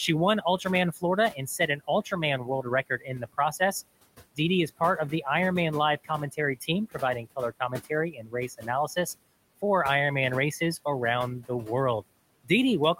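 Right from the start you can hear noise suppressor artifacts. The room noise, sitting about 18 dB under the speech, gets pulled down by about 20 dB between phrases, then swells back under the talking.

There's also speech cut by the noise suppressor, three times. From 0.42 to 2.12 s, quiet bits get treated as noise and ducked by up to about 14 dB, for a bit under half a second in total. From 2.44 to 3.61 s it's deeper, about 20 dB, adding up to roughly a third of a second. From 6.04 to 8.97 s, up to about 16 dB goes missing over well over half a second. Soft consonants and word endings sound swallowed there.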